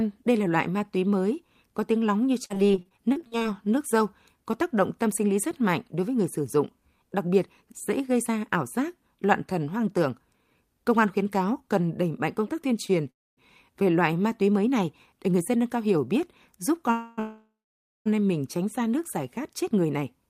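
From 2.45 to 3.47 s, repeated packet loss gives a choppy, robotic sound. Many short holes, the longest 44 ms, are patched by continuing the last sound. About 300 ms of audio is lost.

Overlapping this, from 2.63 to 3.95 s, a jitter buffer slow-down repeats pitch periods. About 74 ms is added. The sound runs at 95% speed, drawn out but at the same pitch.

At 12.86 to 12.91 s, a short stall from a late packet holds one sound for 24 ms. Nothing is missing.

From 13.10 to 13.39 s, just before "về loại ma túy", a call audio freeze stretches the last sound, then goes silent for 250 ms. Two more freezes follow back to back, from 16.92 to 18.08 s, between "cao hiểu biết giúp" and "em mình tránh xa". The first is a 260 ms buzzing hold. The second lasts 860 ms and ends in 550 ms of silence. Packets held up on the network likely caused these freezes. The audio resumes where it stopped.

From 19.19 s to the end, a jitter buffer speed-up cuts roughly 70 ms. 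The sound runs about 6% fast and feels hurried, at the same pitch.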